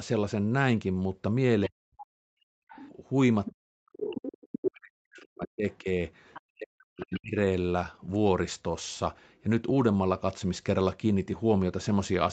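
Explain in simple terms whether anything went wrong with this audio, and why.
Several things went wrong. The speech sinks sharply, and parts drop out, from 1.68 to 2.28 s and again from 3.62 to 7.37 s. This is likely speech suppressed in double talk. Both sides spoke at once, and the echo canceller turned everything down.

From 2.56 to 2.69 s, the room sound suddenly falls away for a brief moment and then comes back. This is background gated by the echo canceller. It clamped the microphone hard while the loudspeaker was playing.

From 2.69 to 7.16 s, a second voice can be heard underneath, quieter than the main speech. This is likely the other side's voice leaking through. Their voice came out of the loudspeaker, and the echo canceller failed to remove it from the microphone.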